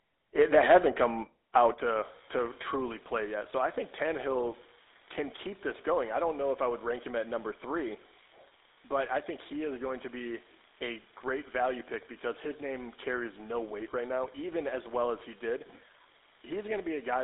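Throughout, the speech carries the buzzy, gravelly roughness of the GSM full-rate codec, consistent with a 13 kbps stream, band-limited to roughly 300 Hz–3.7 kHz with nothing above 3.8 kHz. At 0.73 s the level drops suddenly by about 2 dB, likely a microphone volume step-down by the call software. From 1.56 to 1.66 s the loudest peaks turn harsh and crackly, about 4 dB past the converter's limit with a small share of samples flattened, likely microphone overload. Right after, at 1.74 s, the level falls by about 4 dB, another likely stepped-down microphone volume. From 1.93 s to the end a steady fizz of equal-sized spikes runs under the sound and through the pauses, the signature of an unreliable data bit flipping at random. At 2.76 s the level steps down again by about 2 dB, likely a further automatic microphone volume reduction.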